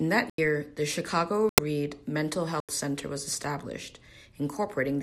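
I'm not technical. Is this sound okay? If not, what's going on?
No. Parts of the compressed speech data were damaged, and the decoder rejected those pieces, so the player filled each gap with silence. This is a corrupt frame muted fault. You hear the speech suddenly drop out three times: 0.30 to 0.38 s, 1.49 to 1.63 s, and 2.52 to 2.69 s. Each gap cuts in abruptly, and the speech resumes on time afterwards.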